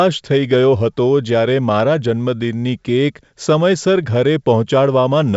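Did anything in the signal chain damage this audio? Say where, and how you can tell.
No, no stage in the chain has damaged this speech recording. It has passed through G.722 wideband telephone coding at 64 kbit/s, with the full band up to about 7 kHz intact and at most a faint trace of the coder's hiss above 4 kHz.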